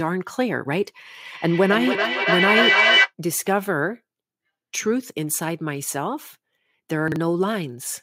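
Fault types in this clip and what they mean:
Feedback echo between two devices: Two devices on one call share a room, so one plays back what the other's microphone sent, and that microphone catches it again. Here the speech returns roughly every 300 ms from 1.23 to 3.13 s, building to about 5 dB above the speech itself.
Chunks out of order: A 40 ms piece of audio plays one chunk late, after the piece that should follow it. Nothing is lost, but the order is scrambled. Around 7.08 to 7.16 s this gives a brief jumbled moment with three hard joins.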